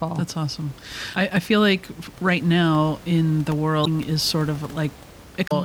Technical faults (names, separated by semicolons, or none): damaged data in a compressed stream